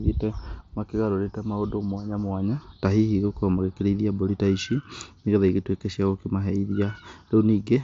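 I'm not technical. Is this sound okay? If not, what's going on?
Yes, there's nothing wrong to worry about here; it's speech recorded through a Bluetooth headset, which is why it sounds a little less bright than a studio recording, with nothing reaching above about 7.8 kHz.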